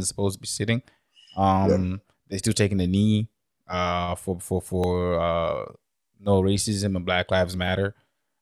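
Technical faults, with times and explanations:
0.57 to 7.68 s, clock drift buffer slips: starting just after "are supposed to be", a click or tick sounds at a steady interval of 1.42 s, about seven times, each a brief snag in the speech. The regular spacing likely comes from two devices running on separate clocks, which disagree by roughly 500 parts per million. The buffer between them drifts until a few tens of samples are dropped or repeated, and that jump produces each click.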